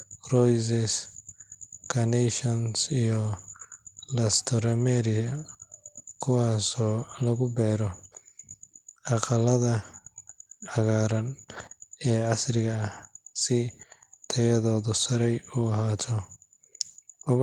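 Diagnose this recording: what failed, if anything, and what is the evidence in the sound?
Nothing has failed: the speech comes through intact at every stage, with the Opus voice compression running in hybrid mode at 24 kbps, keeping the full band up to 20.2 kHz and leaving only light coding damage.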